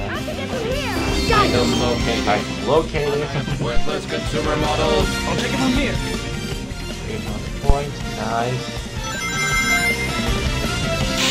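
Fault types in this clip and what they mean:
Phantom power thump: a supply voltage was switched on or off on a live input, and the sudden DC step passed through the coupling capacitors. It shows as a deep thump from 7.70 to 7.76 s, peaking near full scale at about -1 dBFS and dying away within roughly 13 ms.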